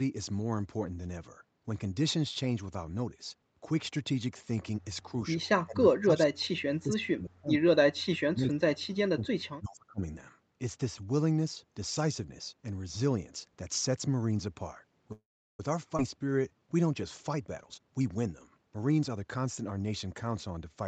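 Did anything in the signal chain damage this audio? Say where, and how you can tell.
Yes. Speech suppressed in double talk, at the call-processing stage, from 5.64 to 7.64 s and 7.94 to 10.01 s: the speech sinks by up to about 40 dB across roughly 1.5 s and then 2 s. The likely cause is the echo canceller mistaking the talker for loudspeaker echo and attenuating both.

Call audio freeze, in the network and jitter buffer, at 15.12 to 15.60 s: the last sound is stretched into a fading fill, then about 360 ms of silence, 466 ms in all. Speech resumes where it stopped, so nothing is lost. The likely cause is delayed packets draining the buffer.

Skip ahead, in the jitter buffer, at 15.97 to 15.99 s: playback jumps forward with only a tiny join, and roughly 150 ms of speech is gone. A stretch was discarded while later packets were already queued, pulling the delay back down.

Jitter buffer slow-down from 16.12 to 16.60 s: the speech drags to 86% speed at unchanged pitch, with about 76 ms added. 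Repeating single pitch periods over and over builds a reserve in the buffer, which drawls the syllables.

Jitter buffer speed-up from 17.20 to 20.12 s: the speech is hurried to 114% speed at unchanged pitch, with roughly 400 ms cut out. Trimming short pitch-period pieces repeatedly sheds the excess buffered delay, compressing the timing throughout this stretch.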